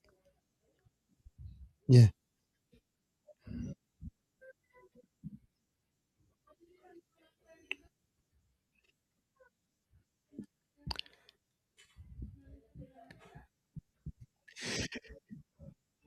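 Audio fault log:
Nothing stood out on listening to this speech recording.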